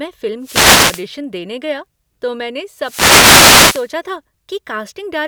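At 0.40 to 1.08 s and again at 2.78 to 3.92 s, the speech is hit by a wireless microphone noise hit, a swishing burst of static where the FM radio link fades and receiver noise swells over the voice. A spectrogram shows broadband noise bands; the waveform shows thickened, fuzzy stretches.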